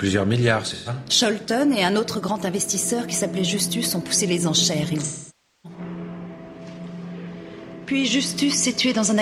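AAC frame loss with concealment occurs twice. From 0.73 to 0.89 s, about 128 ms of audio is missing, which fits three lost frames. The decoder rebuilds that gap from the last good spectrum, so the patch sounds smeared, noisy or phasey. From 5.02 to 5.79 s, a longer loss of about 597 ms, consistent with fourteen frames, exhausts the repeated spectrum. The sound decays toward a very faint noise floor and then fades back in.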